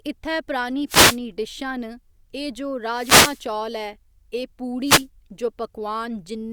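At 0.87 s, just after "इ'त्थै परानी", a wireless microphone noise hit lasts about 0.31 s. Another follows "एह् जो" from 2.86 to 3.47 s, and a third runs from 4.82 to 5.06 s. Each time the FM radio link fades as reflected paths cancel, so receiver noise rises over the speech as a brief swish of static. The longest is the one at 2.86 s.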